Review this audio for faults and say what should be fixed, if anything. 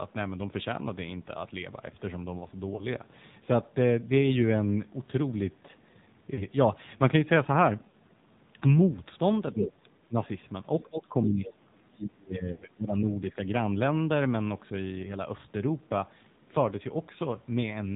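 Throughout the 18-second speech recording, the voice sounds buzzy, boxed-in and plainly synthetic, with nothing above 4 kHz. That is the AMR narrowband mobile codec running at a low bitrate of 7.4 kbps. Its vocal-tract model and sparse pulse excitation cannot capture natural detail. Sending the call over a wideband path such as AMR-WB, or at a higher AMR mode, would prevent this.

Brief dips and warbles occur at 2.76 s (fits one lost 20 ms frame), 6.34 s and 7.90 s (fitting about 40 ms each), and at 12.52 s, where a 100 ms drawn-out smear fades away. These are lost AMR speech frames. The decoder concealed radio-damaged frames by repeating earlier settings at decaying gain. Better radio coverage or stronger channel coding would prevent them.

From 9.54 to 10.15 s the voice dips by roughly 15 dB. From 10.83 to 13.07 s it drops far deeper, around 25 dB, for about two seconds. This is speech suppressed in double talk, likely caused by the echo canceller muting both sides during overlap. 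Tuning its double-talk detection would prevent it.

A second voice intrudes at 9.58 to 9.71 s, only a little below the talker, and faintly at 11.45 to 11.53 s. This is the other side's voice leaking through, likely residual loudspeaker echo the canceller failed to remove. Using a headset or improving echo cancellation would prevent it.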